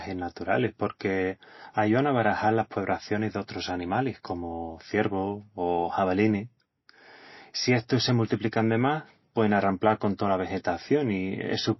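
From start to finish, the speech has plainly audible codec damage. There is nothing above about 5.8 kHz, so the treble is simply gone. Quiet detail seems to flicker in and out, giving a watery, swirly texture. This is likely MP3 compression at a very starved bitrate, consistent with something near 24 kbps. With so few bits, the encoder cuts the top band at a fixed frequency. It also drops weak frequency lines from frame to frame.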